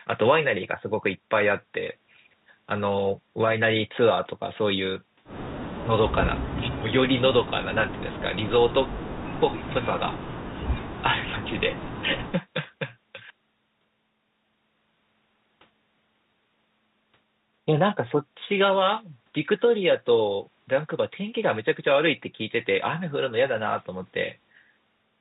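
The speech carries no technical fault, with its band topping out near 4 kHz as expected of G.711 A-law telephone coding on what sounds like a 64 kbps line, and the coding leaves at most a faint trace of its own.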